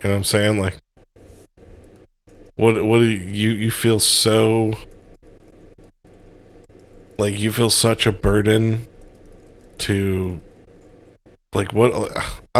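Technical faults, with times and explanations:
Nothing technical stands out in this bit of speech, so there's no fault to flag.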